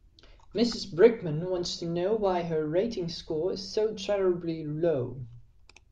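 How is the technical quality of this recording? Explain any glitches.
The signal carries the speech without any audible technical glitches.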